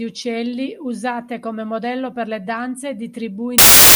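Samples built from the wrong bytes, from 3.58 s to the end at 3.95 s: the bytes of each sample are assembled out of order or misaligned, so rapidly changing low bits dominate the values, and the final speech turns into loud, harsh broadband noise.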